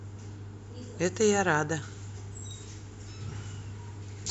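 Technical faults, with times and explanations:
2.51 s, dropped samples: there's a single sharp click in the speech right here, over almost as soon as it starts. It's likely a handful of samples went missing from the stream, a tiny fraction of a millisecond, so the waveform jumps straight from one value to a later one instead of moving smoothly. That sudden step is what you hear as the tick, and it shows as a thin vertical line through the spectrum. The gap is far too short to cut out any actual sound.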